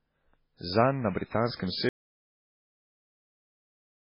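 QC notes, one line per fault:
throughout: MP3 compression, heavy damage, likely at a very low bitrate near 16 kbps; nothing above 5.3 kHz, so speech sounds dull, watery and swirly.
1.89 s to end: audio dropout to silence, the speech cuts out mid-flow into silence with no room tone, likely from lost input.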